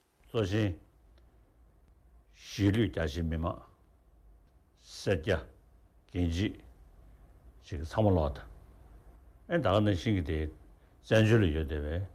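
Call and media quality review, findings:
No faults found across the clip. Nothing audible calls for follow-up on this ticket.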